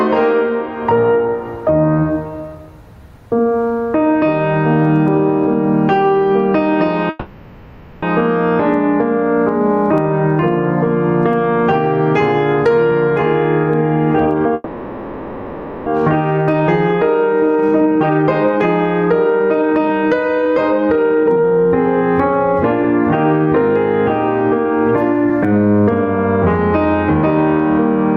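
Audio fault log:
throughout, gain pumping. The level swells and ducks by roughly 15 dB across the music. Loud and soft parts sit close together and sound squashed. The likely cause is excessive input gain feeding a fast limiter.
7.09 to 8.04 s, call audio freeze. The music stops moving and the last sound hangs on as a fading buzz or hiss for about 0.93 s. It then resumes where it left off, so nothing is lost. Delayed packets likely starved the jitter buffer.
12.77 to 14.52 s, jitter buffer speed-up. The music runs at about 117 percent speed with unchanged pitch. It sounds hurried and the tempo wavers. Tiny pitch-period slices, about 0.3 s in total, are cut to shrink the built-up buffer delay.
14.54 to 15.88 s, call audio freeze. A second hang of about 1.32 s follows, with the last sound extended as a fading buzz or hiss. Playback then continues from the same point with nothing missing. 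This gap is likely a stalled buffer again.
15.95 to 26.87 s, jitter buffer speed-up. A long stretch plays at about 118 percent speed and keeps its pitch. The steady beat is lost and the music feels rushed. About 2 s of short slices are removed to work off the extra delay.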